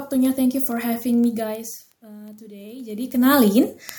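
From 0.15 s to the end, word clock ticks appear about twenty times a second: the receiver's clock drifts a few hundred ppm, slipping single samples. A spectrogram shows evenly spaced thin vertical lines.

Between 2.06 and 3.41 s, automatic gain rising lifts level by about 6 dB after the input fell about 21 dB; the waveform envelope and noise floor swell together.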